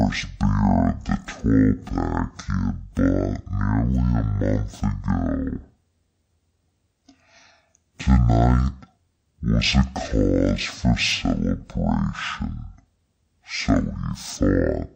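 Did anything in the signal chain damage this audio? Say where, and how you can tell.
Yes. The damage happens where the file's channel layout is interpreted, in sample-format conversion or playback. This is stereo read as mono throughout. The speech runs at half speed, an octave (12 semitones) low, because alternating left and right samples are treated as consecutive samples of one channel. On a spectrogram the formants sit at half their normal frequencies, and a fainter mirrored copy fills the upper half of the band. The waveform looks stretched to double length.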